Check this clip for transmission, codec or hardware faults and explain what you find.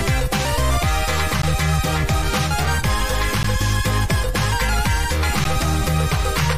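One fault recurs three times. Gaps between stream segments at 1.42, 3.43 and 5.44 s, every 2 s: mismatched segment timestamps leave 11 to 15 ms holes of inserted silence, heard as hard-edged dropouts.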